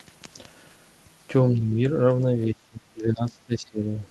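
Speech suppressed in double talk at 1.54–1.84 s and 2.47–4.06 s: the speech drops by about 10 dB, then about 20 dB for the longer stretch. This is likely an echo canceller confusing simultaneous near-end talk with echo and attenuating both.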